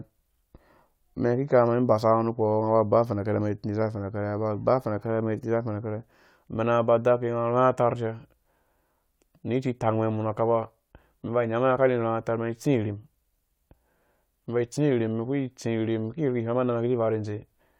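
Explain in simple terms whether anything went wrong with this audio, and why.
Nothing went wrong here.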